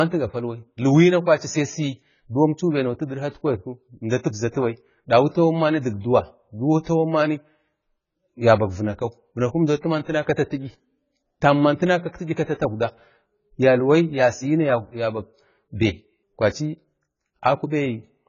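From start to finish the speech has nothing above 7 kHz, and what remains is dull and smeared, with a warbling, fizzy texture on sustained vowels and sibilants. The likely cause is heavy AAC compression, AAC-LC at a bitrate that sounds as low as 16 kbps. A plain low-pass filter would simply roll off the top cleanly. Here the codec starves bands of bits, leaving spectral holes and noisy fill that shift from frame to frame.

From 6.83 to 6.87 s a short hiss of about 31 ms rises just before a sharp onset, and the attack itself sounds softened. This is pre-echo. The transform block spreads quantisation noise sized for the loud attack across the quiet moment that precedes it. Unlike reverb or a smeared tail, which trail after a sound, this noise arrives ahead of the transient and stops when it begins.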